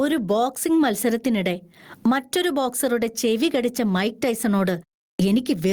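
Gain pumping runs through the whole speech recording. The level ducks sharply as each loud syllable arrives, with the level swinging by roughly 15 dB. The likely cause is input gain set far too high, with a fast limiter or compressor clamping down on every peak. On a waveform the loud and soft parts sit closer together in height than natural speech would.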